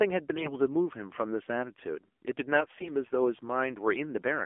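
The whole recording passes through the AMR narrowband mobile codec. The speech sits in a telephone band of 250 Hz to 3.4 kHz. Nothing above that comes through, so it sounds dull and boxed in. The codec models the vocal tract and drives it with a few pulses per frame. At this bit budget the voice turns buzzy and synthetic. The damage is plainly audible. The coarseness points to a low mode, around 7.4 kbps.

AMR bit errors strike twice, from 0.34 to 0.54 s and from 2.54 to 2.90 s. Over a weak link, the less protected bits in each frame arrived flipped, at roughly 7 percent. The checksum on the key bits still passed, so the frames were decoded anyway. The driving pulses land in the wrong places. The finer pitch, gain and spectral values drift. Pitch and level hold, but the voice goes hoarse, scratchy and gargly. The second burst is longer, which fits about seventeen frames hit rather than seven.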